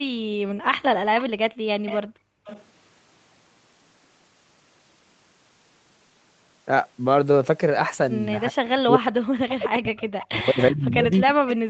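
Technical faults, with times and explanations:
1.2–1.24 s, 1.86–2.64 s, 10.2–10.25 s and 11.13–11.54 s, echo leak: a faint copy of the speech trails the original by 372 ms, about 15 to 25 dB down. This is likely residual loudspeaker pickup that the echo canceller missed. On a spectrogram it shows as weaker, time-shifted harmonic traces.
1.53–2.45 s, background gated by the echo canceller: while the far side played, the canceller clamped the microphone. The room noise falls away by up to about 36 dB, roughly half a second in total, as flat gaps in the waveform's noise floor and dark bands on the spectrogram.
8.49–11.7 s, speech suppressed in double talk: the talker's speech dips and breaks up to the end of the clip, dropping by roughly 40 dB at worst. The likely cause is the canceller attenuating both sides during overlapping talk. On the waveform the envelope is chopped, and the spectrogram shows the upper frequencies thinning.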